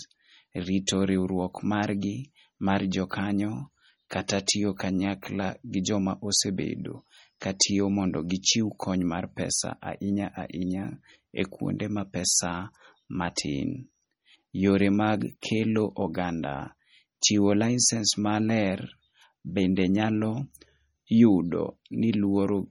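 Across the whole speech clip the sound is watery and swirly, with metallic chirps on s sounds and smeared onsets. Nothing is heard above about 20.2 kHz. The damage is heavy. It is likely MP3 compression, which fits a low bitrate near 32 kbps. Weak frequency lines drop out and return from frame to frame.

Pre-echo appears at 4.28 s and again at 7.60 s. A short hiss runs ahead of a sharp attack, spread over 15 ms and 12 ms. The codec smeared noise meant for the loud attack into the quiet moment before it, so each onset sounds soft.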